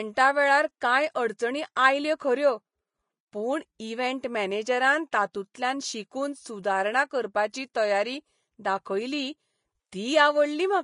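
The whole speech clip carries plainly audible codec damage, likely from Vorbis compression at a low bitrate, which fits about 32 kbps. Nothing is left above 10.6 kHz. The treble is coarsely quantised into hiss. It sounds grainy, with roughened tones.

Pre-echo appears at 0.80 s, 1.76 s and 5.54 s. Each time, a sharp onset sits late in a transform block. The block's quantisation noise spreads backward by about 10 ms. A brief hiss precedes the attack, which sounds softened and smeared.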